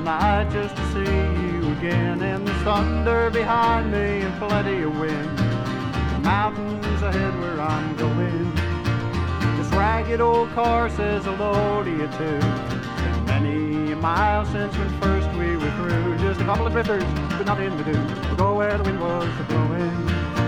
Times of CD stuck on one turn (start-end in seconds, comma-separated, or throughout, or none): none